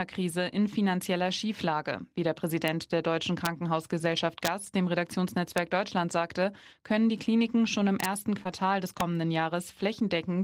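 Integer overflow cracks occur at 2.68, 3.45, 4.45–4.48, 5.58, 8.00–8.05 after "schon im", and 9.01 s. Peaks pushed about 0–2 dB past full scale wrap to the opposite sign, giving sharp cracks.

Short concealed packet loss at 8.43–8.48 s: about 20 ms of speech went missing and 16 ms was synthesised from preceding sound, leaving a brief smear with slight timing stretch.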